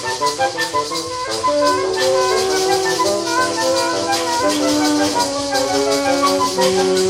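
Nothing is technically wrong with this audio.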